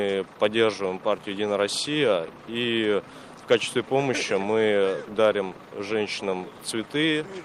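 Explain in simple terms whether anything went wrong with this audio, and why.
Nothing went wrong here.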